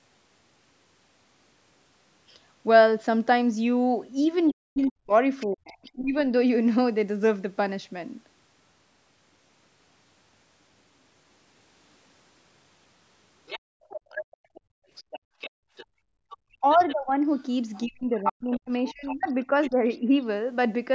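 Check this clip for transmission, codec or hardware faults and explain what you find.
The clip has echo-canceller faults: leaked far-end speech, the talker's speech ducking during double talk, and the room background gated out.

Other side's voice leaking through, from 4.48 to 5.91 s faintly (roughly 25 dB under the talker) and from 13.46 to 19.96 s more clearly (roughly 15 dB under). The likely cause is loudspeaker playback that the echo canceller failed to remove from the microphone. It sounds like a second voice, and a spectrogram shows faint, unrelated harmonic traces beneath the main speech.

Speech suppressed in double talk, at 4.52 to 6.15 s, 16.61 to 17.17 s and 17.86 to 20.12 s, overlapping the leaks. The canceller likely couldn't separate talker from echo and ducked both. The dips reach about 40, 20 and 35 dB, totalling around a second, a third of a second and a second and a half. 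The waveform shows the envelope sagging or notching out.

Background gated by the echo canceller, from 13.6 to 16.3 s, dropping up to about 31 dB for around 1.5 s in total. The canceller clamped the microphone while the loudspeaker played, so the room tone vanishes and returns. The spectrogram shows the noise floor going dark in blocks.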